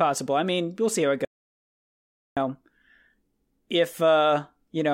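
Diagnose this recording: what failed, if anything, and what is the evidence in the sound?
An audio dropout to silence cuts the speech from 1.25 s to 2.37 s, removing about 1.12 s. The sound stops mid-flow and resumes abruptly, and the gap is silent with no room tone beneath it. The waveform shows a flat line, and the spectrogram a completely blank vertical band. The likely cause is lost input at the capture stage, such as a disconnected device, failed link or mute, while the recorder kept writing silence.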